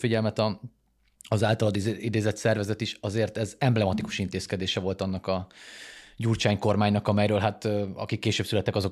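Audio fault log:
No faults detected.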